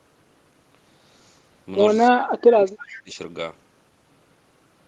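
From 2.11 to 3.17 s, the speech dips and breaks up in pieces. At its deepest it falls by around 25 dB. This is speech suppressed in double talk, and the likely cause is that both ends spoke at once. The echo canceller could not tell this talker apart from the returning loudspeaker sound. So it pulled the level down on everything. About a second of speech is lost or thinned this way.

Inside that stretch, from 2.94 to 2.99 s, a faint delayed copy of the speech slips through. This is an echo leak. It lags the original by 326 ms. It sits far below the speech, at roughly 25 dB below it. A loudspeaker on one side fed its own microphone, and the canceller likely failed to remove it all. The scrap is brief. It passes through the Opus call path, which caps the audio near 12 kHz.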